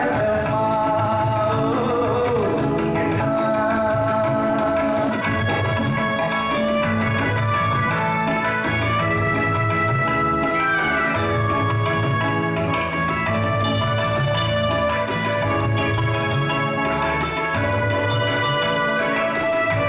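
At 3.20 s the audio skips ahead: roughly a second and a half of sound was discarded while later packets were already queued, so playback jumps straight to newer material with no gap. On a waveform the two sides butt together abruptly, and the spectrogram shows a hard vertical seam with no silent strip.

From 3.50 to 6.79 s a jitter buffer speed-up follows, as the receiver drains its surplus of about 0.7 s by repeatedly cutting out pitch-period-sized pieces. The sound runs at 121% speed with unchanged pitch, so it feels hurried. The spectrogram keeps its harmonic spacing while events crowd closer together in time. The band stays empty above 4 kHz throughout, as the G.711 mu-law call codec allows.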